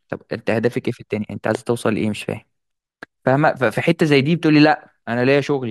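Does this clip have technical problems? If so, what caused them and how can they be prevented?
Yes. A single loud pop at 1.55 to 1.57 s, roughly 10 dB above the speech, is likely a voltage spike from a plug, switch or static entering the signal chain. Unlike a dropout, the speech continues underneath it. Secure connections and mute channels before switching to prevent it.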